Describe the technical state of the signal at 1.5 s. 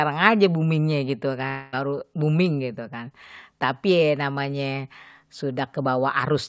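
A long network dropout runs from about 1.48 to 1.75 s, so 1.5 s falls right inside it. The likely cause is a stretch of packets that never reached the receiver, leaving roughly a quarter second of the speech unplayed. The receiver papered over the gap by extending the last sound into a buzzy tail that fades across the whole span, with no true silence. The audio then resumes, still limited to 8 kHz by the G.722 call codec, with the lost portion simply gone.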